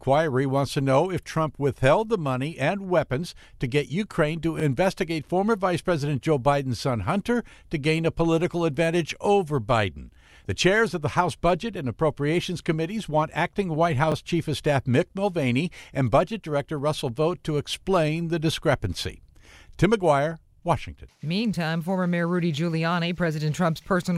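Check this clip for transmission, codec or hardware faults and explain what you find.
Two repeated buffer faults are present, at 4.60 s and at 14.12 s. Each time, fresh audio failed to reach the playback device in time, so it replayed its previous block once more. The repeated block lasts about 23 ms, which fits a buffer of around 1024 samples. The result is a brief stutter in the speech, with a hard join where the copy begins and ends. No audio appears to go missing, only this duplicated fragment.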